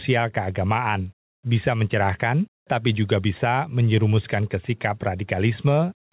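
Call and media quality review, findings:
Gain pumping across the whole clip: level swings by around 5 dB under each loud bit. Likely a fast limiter clamping a mic input that's set way too hot. Level contrast squashed flat. Band tops out at 4 kHz, which fits a G.711 call leg.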